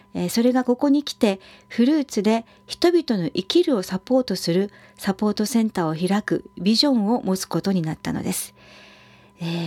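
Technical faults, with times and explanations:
No technical faults can be heard anywhere in the speech recording, and the signal holds steady from the recording chain through to playback.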